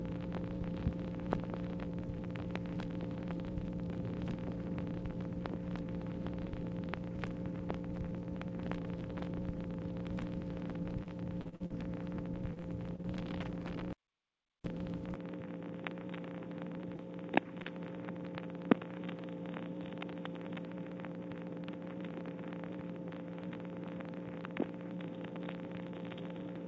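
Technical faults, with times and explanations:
11.03–11.72 s and 12.54–13.06 s: repeated packet loss (robotic sound). Audio packets went missing again and again. The first stretch has five gaps, the longest about 41 ms, and about a quarter of it is filled in. The second has four gaps, the longest about 25 ms. Each hole is patched by stretching the last fragment of sound. The next hole arrives before the sound settles, so it turns choppy, with pieces gone.
13.93–14.64 s: audio dropout to silence. The sound stops dead for about 0.72 s. The gap is silent, with no room noise underneath. The cause is likely a lost input or broken link while writing continued with silence. Nothing from that moment survives. The cut and the return are both abrupt, mid-flow. This is not a quiet passage. The signal itself is absent, so the ear hears a hard hole.
15.15 s to end: input switched to a poorer device. 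From here the sound is narrower and duller, with nothing above 3.8 kHz. Before this, the call path's wider band reached up to 8 kHz, which fits a G.722 codec. The level drops by about 5 dB. A new noise floor appears, roughly 50 dB below the signal. There is no gap at the change. The likely cause is a move to another microphone or a headset call profile.
16.96–17.01 s and 17.63–17.67 s: short concealed packet loss. Two brief holes reached the decoder too late, about 40 ms and 20 ms of audio. The receiver filled each one by continuing the preceding sound, then blended back into the real signal. The result is a quick smear or wobble rather than silence. A short sound at either point may be lost entirely. Both fall within the narrowed section after the device change.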